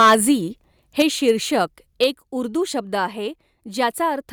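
Right from the start, 0.0 to 0.15 s, the speech has that harsh, crackly edge of microphone overload. The peaks push about 6 dB past what the converter can take and get their tops sheared flat, with roughly a fifth of the samples in that stretch clipped. The likely cause is the mic input gain sitting too high. It happens again from 0.99 to 1.02 s, about 5 dB over, and briefly from 1.28 to 1.31 s, only about 1 dB over.

Right after that second burst, at 1.02 s, there's a microphone volume step down. Voice and background both drop about 4 dB in one go, most likely the call software reacting to the clipping and pulling the device input level down. A second step of about 4 dB follows at 2.04 s, with no clipping just before it. Each one comes across as a sudden drop in level.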